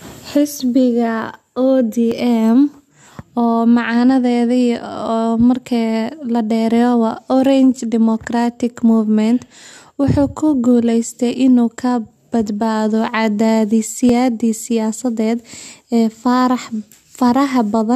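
This speech clip has two brief glitches at about 2.12 s and 14.09 s, each a tiny skip where a few milliseconds of sound go missing. That pattern fits an overlap between stream segments of 2.0 s: adjacent segments' timestamps overlap, so the player trims audio it wrongly treats as duplicated, and the waveform jumps across the cut. Unlike a dropout, nothing falls silent; the sound simply lurches forward.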